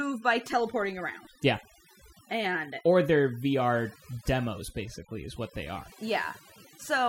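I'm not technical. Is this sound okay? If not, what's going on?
No. Throughout the speech, the pauses drop to an unnatural near-silence sprinkled with twinkling specks. This is overdone noise removal: a cleanup tool set too strongly switched off parts of the sound it mistook for background noise, including quieter bits of the voice.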